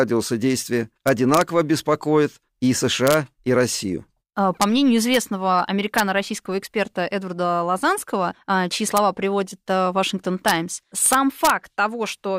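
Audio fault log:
1.08–1.41 s, 3.07–3.14 s, 4.62 s, 5.14–5.17 s, 5.98 s, 8.97 s, 10.48–10.51 s, 11.06–11.50 s: integer overflow, where loud speech peaks wrap to the opposite sign instead of limiting, producing violent cracks far harsher than clipping.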